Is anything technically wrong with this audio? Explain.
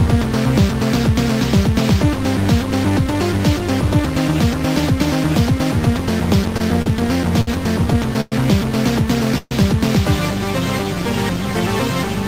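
Yes, the audio has timing faults. From 6.57 to 7.49 s there are repeated stalls (stutter): four short gaps, the longest about 62 ms, where the receiver ran out of late-arriving packets and continued the last sound. On a spectrogram they appear as brief smeared, stretched frames.

At 8.21 s and 9.38 s there is a call audio freeze, lasting 110 and 132 ms. The sound hangs as a fading buzz, and the second one ends in about 30 ms of silence. This is likely from packets held up in transit. It shows as flat horizontal streaks, with the second decaying to a dead waveform.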